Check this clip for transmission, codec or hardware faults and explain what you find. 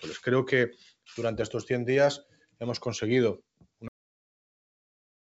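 Three faults are audible: a speech noise suppressor acting on the whole clip, two deep dips it causes, and an abrupt cut-off end.

A noise suppressor applied to music or sounds stays active throughout, treating sustained tones and tails as noise. The level pumps by a few dB and decays thin out.

Sound cut by the noise suppressor occurs from 0.73 to 1.09 s and from 2.23 to 2.61 s. Steady material is pulled down by about 18 dB and about 17 dB, sinking noticeably.

A cut-off end hits at 3.88 s. The final buffers never played, so the audio drops straight to digital silence mid-sound with no decay.

The band stops at 8 kHz, consistent with a G.722 wideband call path.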